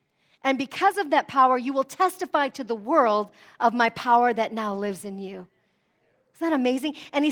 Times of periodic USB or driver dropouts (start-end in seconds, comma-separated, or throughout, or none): none